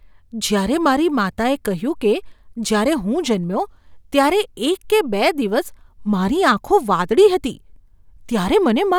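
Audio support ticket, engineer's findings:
Single-bit flip in one sample, likely memory or digital link. Sharp broadband tick at 0.58 s in the speech, peaking about -19 dBFS, unrelated to surrounding signal: bit error spike.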